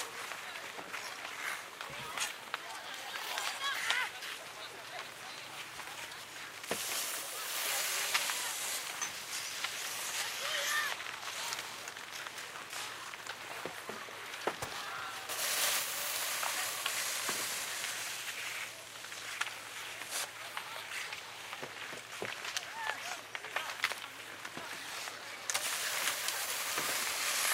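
This recording of everyday sounds jumps abruptly at 8.77 s, with roughly a second of audio gone and the two sides butted together with no gap or fill. This is a skip ahead: a stretch of audio was discarded while later audio was already queued, so playback leapt straight to it. Right after, from 8.93 to 9.72 s, the sound runs slightly fast at unchanged pitch, about 106% speed. It then hurries much more noticeably from 10.95 to 12.73 s, at 124%. Both are jitter buffer speed-up: with excess audio held, the receiver repeatedly cut out pitch-period-length slivers to shrink the delay, trimming around 50 ms in the first stretch and around 400 ms in the second.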